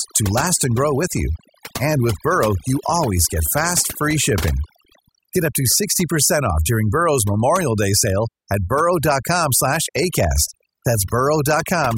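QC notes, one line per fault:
Throughout: overdone noise removal. Noise reduction was pushed too hard on this speech. Any frequency band that sits close to the estimated noise floor gets cut deep or dropped entirely. Quieter parts of the voice fall below that line and vanish with the noise. Between phrases the background drops to near silence, dotted with small twinkling specks where isolated bands flicker on and off.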